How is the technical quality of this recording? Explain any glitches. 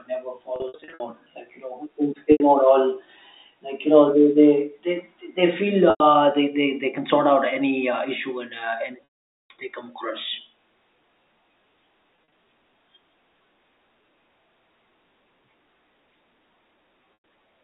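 The recording is marred by repeated packet loss with pitch repetition across the whole clip, heard through a telephone-band G.711 line that limits the sound to roughly 250 Hz to 3.7 kHz.

Losses occur at 0.56 to 1.0 s (280 ms missing in bursts of up to 60 ms), 2.32 to 2.40 s (80 ms), 5.9 to 6.0 s (100 ms), 9.04 to 9.5 s (460 ms), 12.16 to 12.32 s (80 ms in runs of up to 40 ms) and 17.14 to 17.24 s (100 ms). In each gap the receiver loops the last pitch cycle it received and fades it out over about 50 ms. The brief losses therefore sound like a held, buzzy tone. The 460 ms gap at 9.04 s sinks into silence before the speech cross-fades back in.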